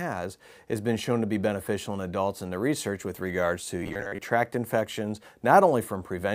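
From 3.83 to 4.23 s the sound turns into robotic sound from repeated short buffers: a rigid, metallic buzz at 100 Hz that loosely tracks the underlying audio. It is likely caused by new audio arriving too seldom, so about half of this stretch is filled by looping the last 10 ms while the real material is skipped. On a spectrogram this appears as evenly spaced harmonic lines every 100 Hz. The waveform shows the same short segment repeating at regular intervals.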